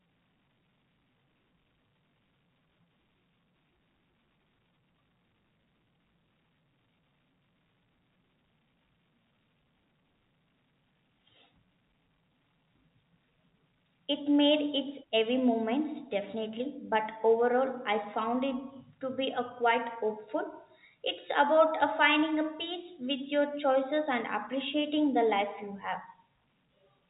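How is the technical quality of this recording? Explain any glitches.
No audible glitches or faults.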